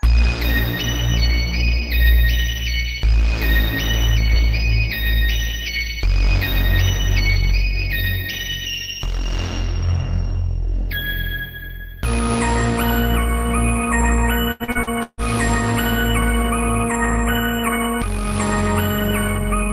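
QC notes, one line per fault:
14.51–15.21 s, repeated packet loss (robotic sound): The audio breaks up in five quick dropouts over about 0.7 s. The longest hole lasts 150 ms. Each gap is patched by stretching the sound just before it, so the fill repeats instead of carrying new detail. About half of this stretch is patched audio. The rest is mostly real signal arriving between holes. That alternation gives the choppy, robotic character.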